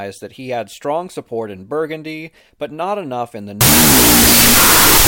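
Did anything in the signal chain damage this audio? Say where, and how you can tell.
Yes. From 3.61 s, after "not enough in the", a wrong sample width at format conversion buries the speech in loud broadband noise at half speed, which fits 32-bit float read as 16-bit integer. The spectrogram fills solid; the waveform turns dense and noise-like.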